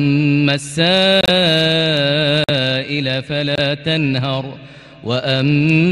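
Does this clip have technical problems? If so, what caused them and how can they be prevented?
Yes. Three abrupt silent holes cut into the sound at 1.21 to 1.29 s, 2.41 to 2.50 s and 3.55 to 3.61 s, each 56 to 90 ms long. This is corrupt frame muting: damaged compressed frames, probably two to four frames of roughly 25 ms each, were rejected by the decoder and replaced with silence while timing stayed intact. Prevent it by protecting the stream with checksums, error correction or retransmission, and by using concealment rather than plain muting.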